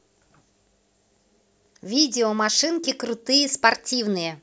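Resampler restarted on every block, from 1.3 s to the end: the sample-rate converter, which sounds like it is working from 24 kHz down to 16 kHz, treats each 100 ms block as a fresh start and loses the neighbouring samples at every boundary. That leaves a small discontinuity at each block edge, heard as a steady ticking at 10 Hz that rides on the speech and falls away in the quiet gaps.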